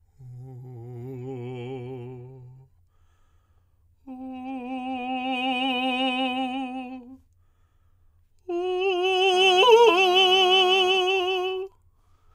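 GSM phone buzz runs from 9.34 to 10.91 s: a 2G phone in a call nearby is pulsing its transmitter 217 times a second, and the audio circuitry rectifies those radio bursts into a hard, raspy 217 Hz buzz full of harmonics, sitting about 20 dB under the music.

GSM signalling bursts follow from 10.94 to 11.72 s, as a phone keeps a call open while its user is silent. It now sends only short groups of bursts, which rectify into even ticks with a longer 217 Hz buzz twice a second, roughly 25 dB below the music.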